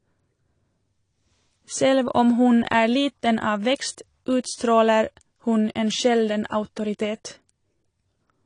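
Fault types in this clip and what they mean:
AAC compression: the speech sounds dull and smeared, with warbling, fizzy sustained vowels and sibilants and nothing above 10.1 kHz. Unlike a plain low-pass filter, the artefacts shift with the sound, likely from AAC-LC coding at a low rate near 32 kbps.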